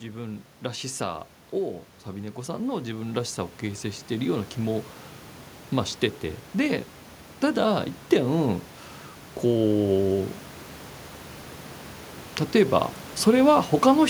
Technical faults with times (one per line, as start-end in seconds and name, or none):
2.11-4.91 automatic gain rising